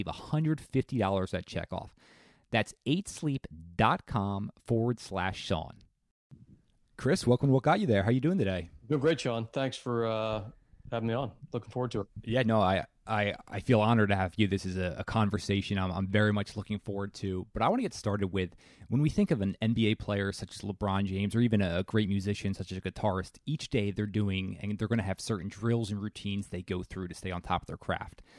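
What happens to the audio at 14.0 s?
Nothing goes wrong at 14.0 s: the speech carries on intact through that moment, with no dropout, click, distortion or other fault to be heard.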